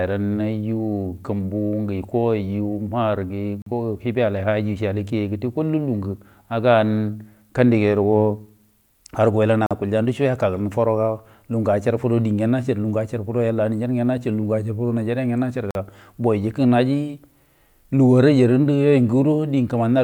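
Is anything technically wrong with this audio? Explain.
Yes. Gap between chunks at 3.62, 9.66 and 15.71 seconds. Each is a 44 ms hole of silence with hard edges. The speech arrives in 6-second chunks, and each join leaves a short silence. Nothing is lost, but the flow stops briefly every six seconds.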